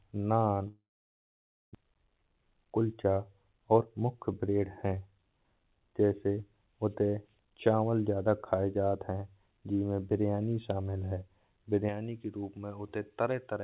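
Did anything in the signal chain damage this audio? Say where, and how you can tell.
Yes, three separate faults.

At 0.68 s the speech collapses into a concealment buzz that decays, then roughly 0.92 s of silence, with nothing real arriving until 1.77 s. This is a long network dropout, likely at the network stage. The receiver spent about 1.07 s filling the gap, and when speech resumes about 0.6 s of it is simply gone. The timing also shifts, consistent with a delay jump of roughly 0.4 s when packets came back.

From 1.85 s to 5.67 s the speech runs fast, about 111 % of normal rate, yet the pitch stays put. That points to a jitter buffer speed-up at the buffer stage. The buffer had built up excess delay, roughly 0.4 s after the dropout, and drained it by repeatedly cutting out short pitch-period segments. The delivery sounds hurried, which is what that time-compression leaves behind.

From 11.89 s to the end of the clip the balance tips sharply toward the top. 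Sibilants turn hard and the sound goes thin and bright. This is pre-emphasis left on: a J.17 treble lift was applied but never undone by the matching de-emphasis. That curve stands about 11 dB above its 1 kHz level at 10 kHz. Here the call path's G.711 mu-law band stops at 4 kHz, so the lift shows as an exaggerated upper band just below that edge.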